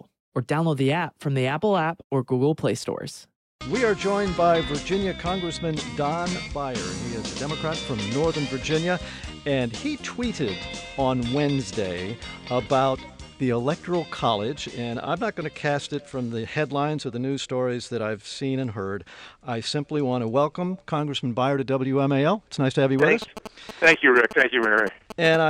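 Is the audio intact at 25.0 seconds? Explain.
No. From 22.99 to 25.36 s a galloping dit-dit-dit of short buzzes at about 217 Hz sits roughly 10 dB below the sound. These are GSM signalling bursts: a nearby 2G phone's radio bursts, rectified by the audio circuitry.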